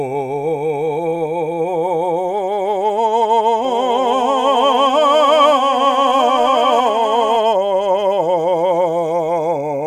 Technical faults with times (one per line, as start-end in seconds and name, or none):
3.65-7.37 doubled audio track